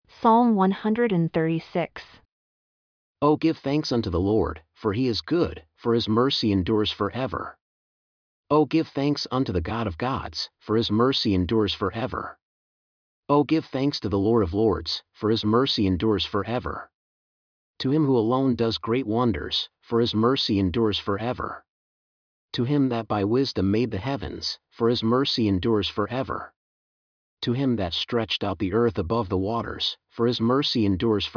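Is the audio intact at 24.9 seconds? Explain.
Yes, the audio is intact at 24.9 seconds, with no fault at that moment.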